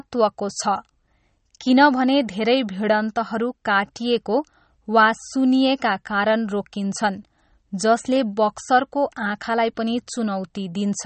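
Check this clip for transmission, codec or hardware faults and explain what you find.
One codec fault runs through the whole clip. Throughout, the speech sounds watery and swirly with smeared consonants, and nothing is present above 8.4 kHz. This is likely MP3 compression at a low bitrate, around 32 kbps, cutting the treble and dropping weak frequency components from frame to frame.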